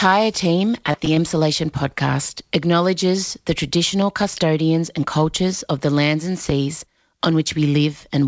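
From 0.68 to 1.18 s, just before "podcast acknowledges the", there's a burst of repeated packet loss with that robotic sound. Six separate holes hit in that half-second, none longer than 20 ms. The jitter buffer papered over them by stretching the last bit of audio, about 84 ms of patching in total, and roughly 60 ms is still missing. That's about a sixth of the stretch concealed, so it comes out choppy instead of cleanly cut.

Then there are two loud pops. The first runs from 4.02 to 4.05 s, between "podcast acknowledges the" and "custodians and cultures of". The second runs from 6.50 to 6.53 s, right after "of the lands and". Each is a single sharp click, around 10 dB above the speech, and the talking carries on under it. The likely cause is a voltage spike, from a switch, static or a driver hiccup, getting into the chain. The call path's G.722 coding, with nothing above 8 kHz, sits under all of this.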